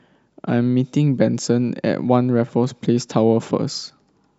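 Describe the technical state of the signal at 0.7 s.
At 0.7 s the speech signal is intact, with no audible dropout, distortion, glitch or other technical fault.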